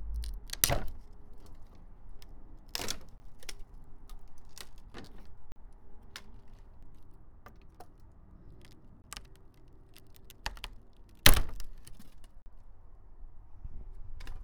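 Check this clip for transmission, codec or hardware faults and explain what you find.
Four blocks of digital silence interrupt the audio, at 3.18 to 3.20 s, 5.52 to 5.56 s, 9.02 to 9.04 s and 12.42 to 12.46 s. Each time, the output buffer likely went unfilled in time and was passed on as zeros. The first and third gaps last 20 ms, the second and fourth 40 ms. Each block drops to dead silence and returns with no fade. All four gaps are long enough to come across as brief audible holes rather than ticks.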